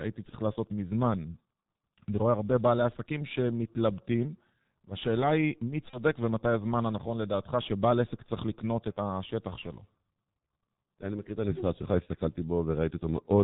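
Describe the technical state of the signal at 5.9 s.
At 5.9 s the audio is carried by the G.723.1 codec, whose heavy low-rate coding fits its 6.3 kbit/s mode. Nothing above 4 kHz is passed, and the slowly updated voice model leaves the speech muffled and hoarse with smeared consonants.

VoIP packet loss concealed by the speech codec is audible from 5.90 to 6.00 s. A gap fitting a single lost 30 ms frame was filled by extrapolating the previous pitch and spectral envelope at falling gain. It sounds like a brief, fading stretch of extrapolated sound, and the voice stays weak or distorted for tens of milliseconds after about 6.0 s.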